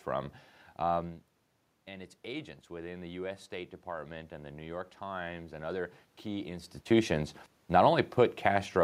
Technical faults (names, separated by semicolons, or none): automatic gain rising